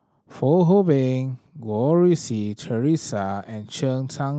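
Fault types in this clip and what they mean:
No faults found in the speech; the call path's codec limits the top end to around 12 kHz, consistent with an Opus link working as intended.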